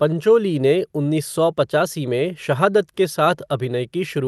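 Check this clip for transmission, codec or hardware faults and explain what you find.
No faults found here.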